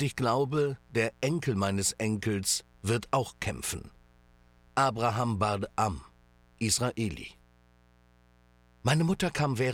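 A mains buzz runs through the whole clip, from start to finish. Its base is 60 Hz mains. Sharp switching spikes, such as from a dimmer, a rectifier or a missing shield, leaked into the signal path. They arrive twice in every mains cycle. That spiky shape spreads energy into harmonics of 60 Hz reaching up to several kHz. The result is a steady, raspy buzz. It sits about 35 dB below the wanted sound.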